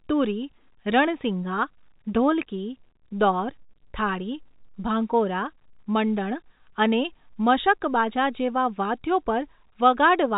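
No technical faults can be heard in the speech, which carries the narrow telephone-line character of G.711 telephone coding, consistent with a 64 kbps A-law line, with nothing above 4 kHz and at most a faint noise floor that follows the level of the signal.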